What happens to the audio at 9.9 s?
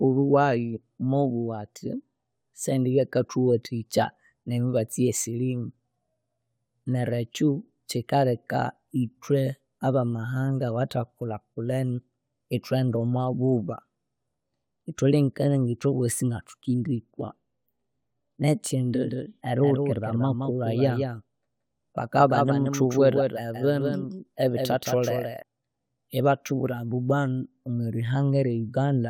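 Nothing goes wrong at 9.9 s: the speech runs on intact through that moment, with no dropout, click or other fault to be heard.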